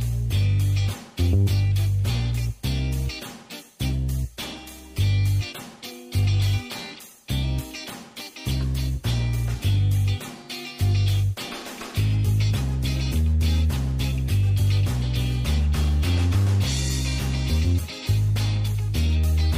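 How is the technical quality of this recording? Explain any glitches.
No glitches or faults are audible.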